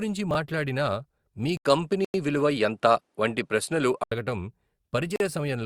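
Chunks out of order at 0.31 to 0.35 s: one 10 ms chunk was written three chunks late, so the speech jumbles briefly at the hard joins. From 1.57 to 4.12 s, the input likely switched to a poorer device. Nothing above 11.6 kHz gets through, an 80 ms silence marks the switch, the level shifts by about 5 dB, and new noise sits roughly 55 dB below the signal. The sound turns duller until it clears at 4.12 s. Two Bluetooth stalls, likely from the headphone buffer running dry, cut the audio to silence for 94 ms at 2.05 to 2.14 s and for 42 ms at 5.16 to 5.20 s.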